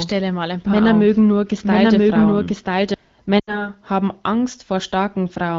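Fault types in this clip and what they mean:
Doubled audio track, 0.0 to 2.94 s: A second full-band copy of the speech runs about a second behind the original, at roughly the same level, so the opening sounds like two overlapping passes of the same talker. The copy is clean and dry, with no decay or room colour. It is already under way when the clip begins and cuts off abruptly at 2.94 s, most likely from a slower second capture path or two out-of-step copies left in an edit.
Lost AMR speech frames, 3.39 to 3.70 s: About 80 ms of speech is missing, which fits four lost 20 ms frames. The AMR wideband decoder, which otherwise sounds clear here, fills each missing frame by repeating the last good pitch and vocal tract settings at falling gain. The sound therefore smears and drains away quickly, as expected in wideband, and the speech that follows returns briefly thin or rough before recovering.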